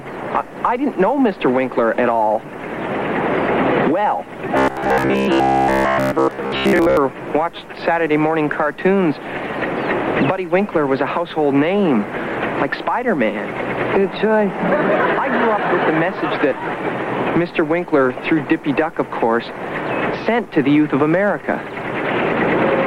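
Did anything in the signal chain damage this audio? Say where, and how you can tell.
Yes. Between 4.57 and 6.97 s it goes robotic: a rigid, metallic buzz locked at 66.8 Hz, classic robotic sound from repeated short buffers. Likely a starved driver or buffer, looping a roughly 15 ms chunk over most of that stretch and skipping the real audio.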